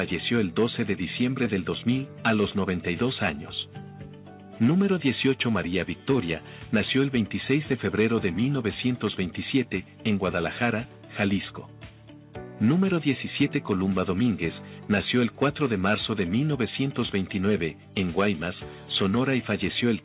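No technical faults can be heard anywhere in the clip. It has passed through a working WebRTC call path, and nothing reaches above 4 kHz, a narrowband ceiling that fits the G.711 mu-law codec.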